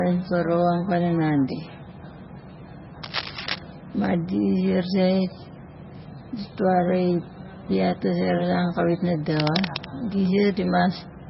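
Likely low-bitrate MP3 compression, around 17 kbps, causes heavy codec damage throughout the speech: nothing above 5.6 kHz remains, and the sound turns watery with swirling artefacts. From 3.03 to 3.59 s and again from 9.36 to 9.86 s, cable scratch noise, likely from a worn contact being moved, adds dense scratching bursts only a little below the speech level.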